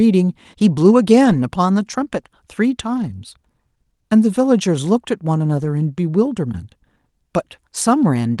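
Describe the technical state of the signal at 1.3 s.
At 1.3 s the speech passes through a lost packet rebuilt from error correction, spanning 1.25 to 1.39 s. Several packets went missing, and the decoder filled about 80 ms of them from the lower-bitrate copies that the following packets carried. There is no dropout. On a waveform the envelope stays continuous. A spectrogram shows a grainier, noisier patch where harmonic detail blurs, set against the Opus call path's 12 kHz ceiling. To the ear, those frames sound briefly rough and hissy.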